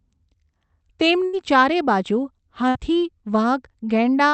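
Speech over what sounds like an Opus call path, with two bursts of packet loss, at 1.25–1.35 s and 2.69–2.77 s. Each time a run of packets went missing, the receiver continued the last sound and turned it down for roughly 76 and 59 ms, then picked up later with that stretch gone.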